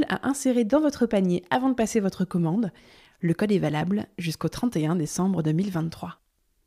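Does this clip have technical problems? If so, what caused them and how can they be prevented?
No, there are no technical faults to point to in this recording. Nothing in the speech calls for a cause to trace or a fix to apply.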